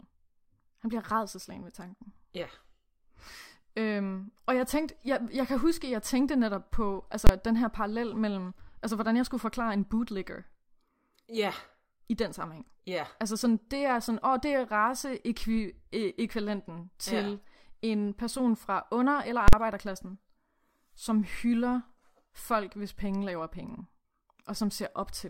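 At 7.27 s the speech is broken by a single loud bang lasting about 23 ms. A second, longer one follows at 19.48 s, about 46 ms. Both are invalid numbers at full scale. A calculation produced infinite or invalid values, which pinned the output at maximum level for a whole block. The lengths fit blocks of 1024 and 2048 samples.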